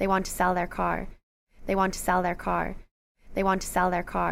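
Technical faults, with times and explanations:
No technical faults, so there are no times or explanations to give.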